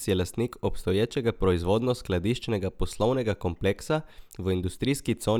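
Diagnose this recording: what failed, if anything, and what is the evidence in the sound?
Nothing failed in this recording, and the sound offers no evidence of a fault at any stage.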